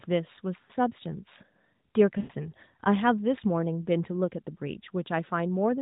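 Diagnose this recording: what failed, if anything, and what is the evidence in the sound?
The failure is in the network stage: lost AMR speech frames. At 0.62 to 0.70 s the sound briefly smears and dips, which fits about 60 ms of lost frames. At 2.18 to 2.32 s a longer gap stretches the sound and fades it toward silence, which fits about 120 ms lost. The decoder kept repeating the last good pitch and vocal-tract settings at falling gain. The sound returns weak or rough. It sits within the narrowband AMR mobile codec's 4 kHz limit.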